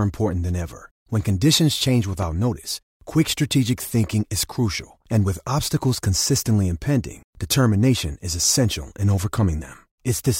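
Speech with a single loud pop from 2.22 to 2.25 s, between "conditions change" and "notice quick strategic thinking," peaking a few decibels above the speech, likely a plug, switch or static discharge. Unlike a dropout, the speech continues unbroken underneath.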